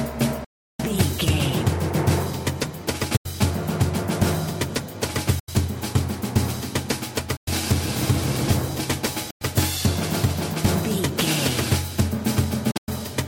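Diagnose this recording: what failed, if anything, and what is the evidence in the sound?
Hard-edged silent holes at 0.44–0.80 s, 3.17–3.26, 5.39–5.49, 7.37–7.48, 9.30–9.42 and 12.71–12.88 s (scattered) point to the wireless playback link, likely a Bluetooth dropout. Sound resumes as if it had played on, unlike an underrun, which picks up where it stopped.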